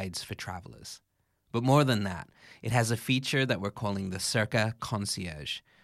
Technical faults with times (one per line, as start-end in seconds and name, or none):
none